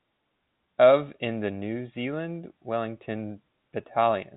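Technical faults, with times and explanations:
No technical faults can be heard in this speech clip. It has the narrow band of G.711 telephone coding, with nothing above about 3.8 kHz, and the faint level-following hiss of its 8-bit logarithmic steps fits A-law at 64 kbps.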